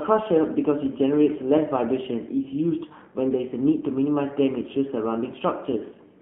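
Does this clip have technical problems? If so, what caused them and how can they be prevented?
Yes. Throughout, the speech has AMR narrowband mobile codec damage. The codec rebuilds the signal from a vocal-tract model driven by sparse pulses, which gives a buzzy, synthetic tone consistent with a low 7.4 kbps mode. The band spans only 150 Hz to 3.4 kHz, so a spectrogram is empty above that. To prevent it, capture through a wideband path instead of a phone line.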